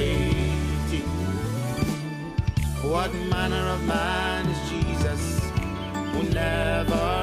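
No technical faults are audible anywhere in this recording.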